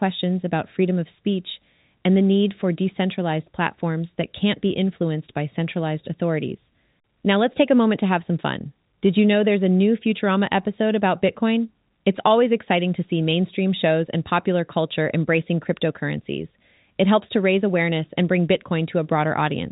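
Nothing here counts as a fault: the speech simply sounds like it's come down an ordinary G.711 telephone line, with nothing above 3.8 kHz, which is exactly what that format does.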